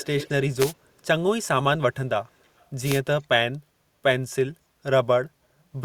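Right at the start, from 0 to 0.33 s, there's an echo leak. You get a delayed copy of the speech trailing 326 ms behind, and it's fairly strong, around 10 dB down. The likely cause is a loudspeaker on the far end whose echo canceller let some of it slip back. At 0.58 to 0.73 s a wireless microphone noise hit cuts in as a short swish of static, the sound of an FM mic's signal fading and receiver noise surging up. The echo returns at 2.26 to 2.65 s with the same 327 ms lag but barely audible this time, likely the same leak. A second static burst follows at 2.84 to 3.0 s.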